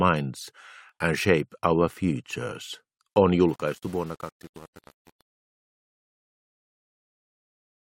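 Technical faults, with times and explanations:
0.89 s and 4.87 s: overlap between stream segments. About 16 to 18 milliseconds vanish, so the waveform jumps with a tiny click or skip, not a silent gap. This fits segments about 1 s long.
3.43 to 7.85 s: truncation distortion on a fade. The fade-out turns gritty as it quietens, which fits roughly 7-bit steps without dither rather than steady hiss.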